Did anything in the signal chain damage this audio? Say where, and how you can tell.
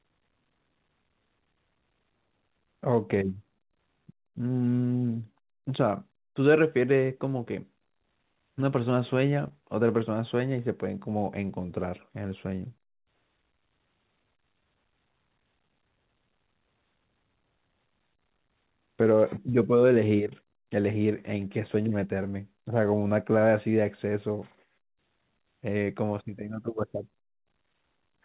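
Yes, at 9.48 to 9.52 s there is a brief smear in the speech, with the sound holding and wobbling for a moment before blending back. This is short concealed packet loss at the network stage. About 20 ms of audio arrived too late for the decoder, and the receiver covered the gap with roughly 22 ms of synthesized continuation of the preceding sound, then blended back into the real signal. The call path itself limits the whole clip to 4 kHz.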